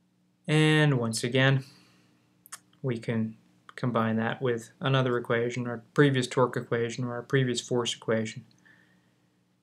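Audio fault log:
No audible faults detected.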